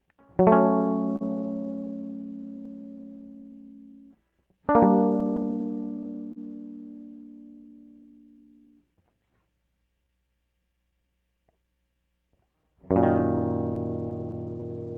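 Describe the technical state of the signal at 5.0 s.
At 5.0 s the sender's audio clock is running about 3 percent slow against the receiver's. This is clock drift between sender and receiver, and it lasts the whole clip. The jitter buffer keeps draining, so the music is fed in slightly late and can briefly starve, giving small recurring hiccups at uneven intervals.

To keep up, the receiver makes repeated timing corrections from 0.04 s to 13.38 s, around 5.0 s as well. It repeats short slivers of the music, all in the same direction, for a net playback speed of 98 percent and roughly 0.3 s added overall. Each patch is slight.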